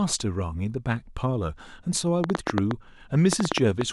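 Speech clip with a train of clicks from 2.24 to 3.82 s: about fifteen irregularly spaced pops, roughly 7.6 per second and well above the speech, likely interference. They appear as sharp waveform spikes and thin vertical spectrogram lines.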